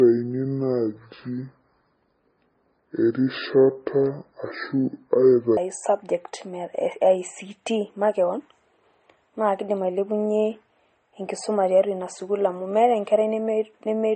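From the start to 5.57 s the speech drags deep and slow, its pitch sunk by around ten semitones, then snaps back to normal. This is a section at the wrong speed: that stretch likely plays at 0.61 times its recorded rate, so tempo and pitch drop together.

Across the whole clip the speech sounds dull and smeared, with two different kinds of codec grit layered on each other. This points to transcoding between lossy codecs, likely MP3 at about 32 kbit/s re-encoded as Vorbis at about 36 kbit/s, each stage adding artefacts while keeping the low cut-off.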